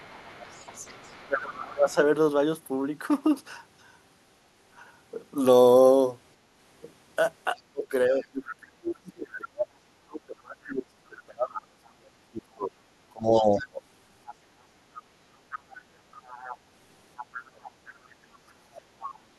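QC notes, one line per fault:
0.00–1.27 s, other side's voice leaking through: a faint second voice sits about 25 dB under the talker, likely loudspeaker echo the canceller left in the microphone signal.
1.27–1.99 s, speech suppressed in double talk: the talker dips by up to about 25 dB for most of this span while the far end is also active, likely the canceller attenuating both voices.
7.55–13.81 s, speech suppressed in double talk: repeated cuts totalling about 5 s, deepest about 35 dB, leaving the talker broken up, likely from overlapping far-end audio being treated as echo.
8.21–8.25 s, other side's voice leaking through: a brief scrap of the second voice, about 30 dB below speech, likely echo that slipped past the canceller.
13.36–19.11 s, other side's voice leaking through: a sustained second voice about 20 dB under the talker, likely uncancelled loudspeaker pickup.
17.41–18.79 s, speech suppressed in double talk: the talker drops by up to about 25 dB, roughly 0.7 s in all, as both sides overlap, likely the canceller attenuating both voices together.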